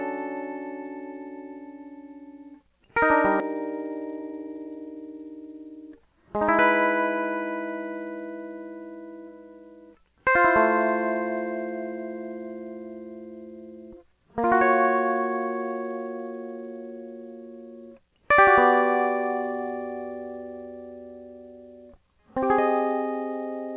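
At 3.4 s the music skips ahead: roughly 0.7 s of audio never plays, likely dropped in transit or discarded by an overflowing jitter buffer, and the two sides are spliced with no gap. Across the clip, nothing above 4 kHz comes through, which fits a narrowband G.711-type call path.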